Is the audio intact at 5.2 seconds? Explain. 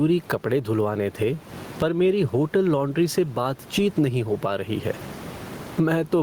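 No. Gain pumping runs through the whole clip, including 5.2 s. The level swings by around 20 dB. The room noise sits about 30 dB under the speech, loud and soft parts end up closer in level, and the sound is squashed. The likely cause is excessive input gain reined in by a fast limiter.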